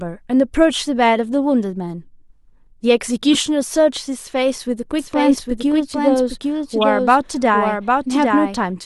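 Speech, with two kinds of fault. Damaged data in a compressed stream causes short glitches at 3.33 to 3.35 s and 6.81 to 6.84 s. Corrupted frames make the decoder lose sync and skip ahead to the next good frame. From 4.99 s to the end there is a doubled audio track. A dry, full-band copy trails the original by about 0.7 s, roughly 5 dB quieter, and starts abruptly. This is likely a second, slower capture path or an edit holding two offset copies.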